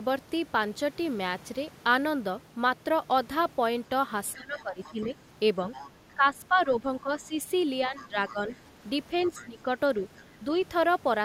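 From 4.34 to 5.17 s the talker's speech gets pushed down, by roughly 15 dB at its worst, and it dips and thins out in patches. That's speech suppressed in double talk, likely because the echo canceller couldn't tell the talker apart from the far end's audio on the loudspeaker and turned everything down together. The same ducking comes back, a bit shallower at around 10 dB, from 6.15 to 7.34 s and again from 7.87 to 8.49 s. A short, deep dip of about 15 dB follows at 9.3 to 9.68 s.

Overlapping most of those stretches is the other side's voice leaking through, likely residual echo the canceller failed to strip from the mic. It's a faint second voice sitting about 20 to 25 dB under the talker. There's a brief scrap at 5.01 to 5.07 s, then longer bits at 5.73 to 6.13 s and 7.97 to 8.44 s, and a short one at 9.25 to 9.42 s. It mostly surfaces right where the talker is being ducked.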